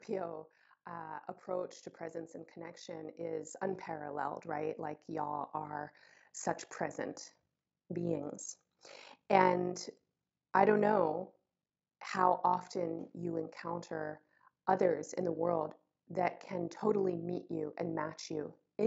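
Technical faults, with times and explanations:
Throughout, overlap-add ripple: the speech carries a fast, buzzy flutter, a rough robotic tremolo pulsing around 50 times a second, with the level dipping and recovering by about 11 dB on every cycle. The audio was split into windowed frames and rebuilt with an overlap whose windows do not add up to a constant gain, so the loudness rises and falls once per frame.
0.85 to 8.96 s, automatic gain rising: the voice and the background swell together over these eight seconds, climbing by about 13 dB in a slow, steady ramp rather than a jump. The automatic gain control judged the input too quiet and raised its gain gradually, lifting everything in the signal at once, background included. The lowest bass is taken out by the call's microphone processing, which is expected and separate from this swell.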